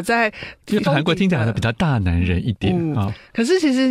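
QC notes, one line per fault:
0.70–0.87 s, frames out of order: a 0.17 s stretch of speech plays with its two halves swapped. Each half is about 78 ms, which points to two runs of three codec frames of roughly 26 ms each, delivered and decoded in swapped order. The sound lurches back and forth in a garbled flutter. No time is lost.
2.63–2.69 s, frames out of order: a shorter swap of two adjacent blocks of about 26 ms each, which suggests single frames exchanged. The 60 ms stretch briefly jumps backward, giving a quick stutter and no change in the clip's overall timing.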